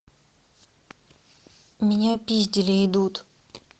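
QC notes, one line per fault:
2.11 to 2.16 s, short concealed packet loss: 20 ms of audio never arrived in time, so the decoder stretched the preceding sound and blended back, leaving a brief smear.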